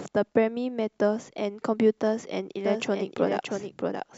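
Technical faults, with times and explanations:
2.65 s to end, doubled audio track: A second full-band copy of the speech starts abruptly and runs on to the end. It trails the original by about 0.7 s, roughly 5 dB quieter. It has no decay or room colour. It is likely a slower second capture path.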